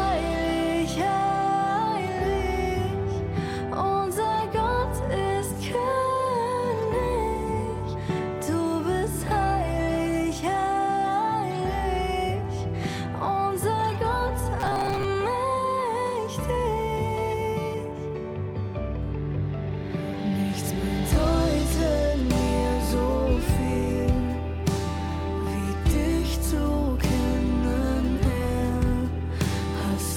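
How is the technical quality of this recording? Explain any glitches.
The recording has one clear glitch: robotic sound from repeated short buffers, from 14.60 to 15.05 s. For that half-second the audio collapses into a rigid, metallic buzz pitched at 134 Hz that still loosely tracks the underlying sound. The likely cause is audio arriving too slowly, so playback loops the most recent fragment of roughly 7.5 ms to fill the gap. About half of the material in that span is replaced by repeats and lost, and the constant loop rate imposes the fixed 134 Hz tone.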